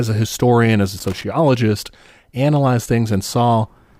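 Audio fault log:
0.98–1.24 s, loose connector crackle: just after "a historian as a" there's about a quarter second of ragged, irregular scratching over the speech. That's a worn or dirty contact flickering open and shut as it shifts, chopping the signal into rapid, uneven fragments.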